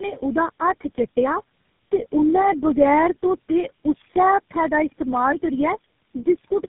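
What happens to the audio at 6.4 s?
At 6.4 s the speech carries tandem speech coding, present across the whole clip. It sounds rough, muffled and warbly, which fits about four narrowband speech codecs in a row, each re-coding the previous one's errors. A spectrogram shows nothing above 3.7 kHz and smeared, unstable harmonics.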